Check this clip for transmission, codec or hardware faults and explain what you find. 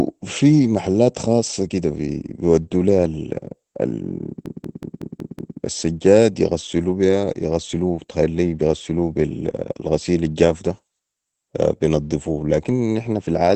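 Two faults are present: codec damage across the whole clip, and one stretch of looped audio.

Opus voice compression runs from start to finish. The speech has nothing above about 8.6 kHz, the wideband limit of Opus's SILK linear-prediction mode. Its excitation is coded coarsely, which fits a bitrate around 12 kbps. The voice sounds plainly muffled and slightly hoarse and robotic. A transform codec such as MP3 would leave swirling, watery highs instead. Here the top is simply cut off at a fixed edge, and the roughness sits in the voice itself.

A system hang loop runs from 4.46 s to 5.57 s, ending just before "السجاد يغسلو بيها يغسلو". The machine stalled while the audio hardware kept replaying the same buffer. One 186 ms slice, which fits an 8192-sample buffer, repeats exactly six times at about 5.4 per second, so it sounds like a machine-gun stutter. Little or no audio is lost afterwards. 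Packet-loss concealment would smear or fade the sound, and a stuck 20 ms codec frame would give a faster buzz. These repeats are identical and evenly spaced.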